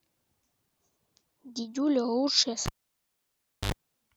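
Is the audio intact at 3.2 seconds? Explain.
No. At 3.2 seconds the cable is pulled out and not yet plugged in again. From 2.66 s to 3.72 s, a pop drops the speech into near silence for about 1.01 s. Then a 69 ms burst of 50 Hz mains buzz sounds as the plug tip touches, and a second pop restores the sound.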